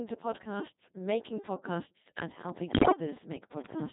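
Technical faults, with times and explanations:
Throughout: Codec 2 vocoder. The speech sounds robotic and buzzy, with heavy damage, because at 2.4 kbit/s only pitch, voicing, energy and a spectral envelope are sent, and the decoder rebuilds the voice from sine waves instead of the original waveform.
2.39 to 3.93 s: train of clicks. About thirty sharp ticks, roughly 15 per second at uneven spacing, pop out above the speech, some about 5 dB louder than it. The likely cause is interference or a struggling interface injecting repeated pulses.
2.67 to 3.00 s: bit errors on digital voice radio. The synthetic voice lurches in pitch, level and timbre, breaking into warbling, bleepy gibberish, because roughly one bit in seven was flipped, corrupting the parameters of 14 frames in the stretch.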